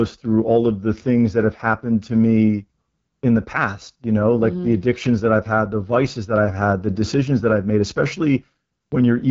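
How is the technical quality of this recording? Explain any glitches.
The speech is plainly degraded by codec coding from start to finish. AMR wideband (HD Voice) codec, throughout: a pulse-driven vocal tract model starved of bits makes the speech rough and raspy, which fits the 8.85 kbit/s mode, and nothing remains above 7.4 kHz.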